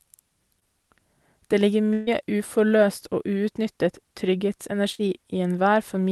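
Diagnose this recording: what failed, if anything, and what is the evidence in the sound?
Short concealed packet loss occurs in the network stage, with receiver-side concealment in the call path, at 0.59 s and 4.95 s. About 20 ms of audio is missing at 0.59 s and about 40 ms at 4.95 s. The decoder extended the preceding sound to cover each hole and then blended back, which is heard as a brief smear or wobble. On a spectrogram, each spot shows the preceding content running flat and slightly blurred for a few hundredths of a second. The waveform shows the preceding sound repeated, followed by a crossfade.

A burst of packet loss runs from 1.93 to 2.09 s, also a network failure. Roughly 140 ms never arrived in time. The receiver filled about 135 ms of it by carrying the last sound forward and attenuating it, so there is no dropout to silence, only a held, fading buzz or hiss. Sound then resumes further along, with the middle missing. 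A spectrogram shows frozen content dimming over the gap, then a sudden change of content. The Opus stream's spectrum tops out near 12 kHz, consistent with about 32 kbps.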